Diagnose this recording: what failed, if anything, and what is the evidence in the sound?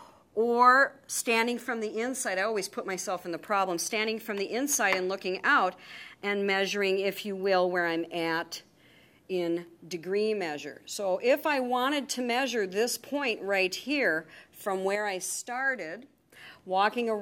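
A sudden gain jump shows up late on. At 14.95 s the level drops by about 6 dB in one step, with the background noise falling right along with the sound, and at 16.32 s it snaps back up just as abruptly. Because noise and signal move together, it's a digital gain stage, not the source. A clean 6 dB step is exactly one bit shift, so this is likely a gain setting or shift applied without a ramp somewhere in the processing chain.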